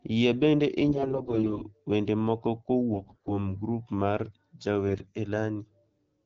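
Three bursts of AMR bit errors hit the speech: 0.88 to 1.61 s, ending just before "wende moko"; 2.94 to 3.47 s, between "wende moko" and "grup mar"; and 4.88 to 5.12 s. Weakly protected frame bits arrive flipped, around one in ten, rising to about one in five in the second burst, so excitation pulses and fine pitch, gain and spectral values decode wrong. The voice keeps rough pitch and loudness but turns hoarse, scratchy and gargly, against the otherwise clear sound of the wideband codec at 12.65 kbit/s.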